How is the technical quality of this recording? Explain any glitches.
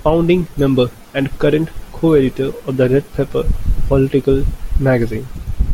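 Nothing glitchy turns up anywhere in this recording, so there's nothing to explain here.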